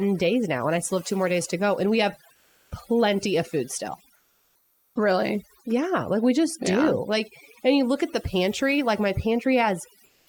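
A speech recording with overdone noise removal throughout. The suppressor is set too hard. It pulls individual frequency bands down whenever they sit near its noise estimate. Quiet parts of the voice are cut along with the hiss. The background drops and breaks up into twinkling specks. Three pauses also have comfort noise in place of the background. The first runs from 2.33 to 2.71 s, between "we have" and "plenty of food". The second runs from 4.15 to 4.95 s. The third runs from 10.05 to 10.27 s. In each gap the real room sound gives way to a smooth, featureless hiss. It is about 3 dB quieter in the first two gaps and about 7 dB quieter in the last. The likely cause is discontinuous transmission in a voice codec such as Opus, with the receiver filling silence with synthetic noise.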